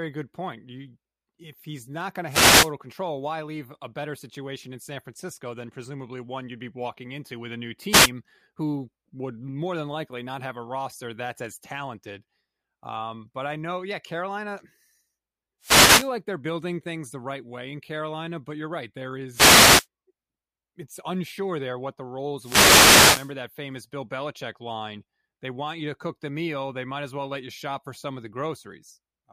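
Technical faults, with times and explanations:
2.27–2.72 s, 7.89–8.11 s, 15.61–16.11 s, 19.31–19.87 s and 22.37–23.34 s: wireless microphone noise hits. Each is a brief swish of static over the speech, lasting from about 0.2 s to nearly 1 s, with the longest at 22.37 s. They occur when the analogue FM radio link fades because reflected signal paths cancel the direct one. The receiver's own noise then rises above the weakened carrier.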